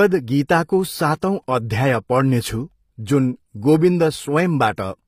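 HE-AAC compression runs throughout the speech. The treble is synthetic, s sounds turn gritty and lispy, and nothing remains above 15.5 kHz. This is likely spectral band replication, which copies lower bands upward under a coarse envelope, fitting a bitrate near 24 kbps.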